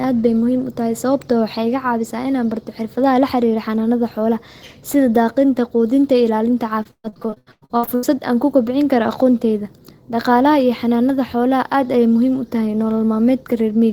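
From 6.83 to 8.05 s, repeated packet loss (robotic sound) sets in. Audio arrives late or not at all, leaving holes up to 130 ms long, each patched by extending the last sound. With about half the stretch concealed, the speech turns choppy, with pieces missing.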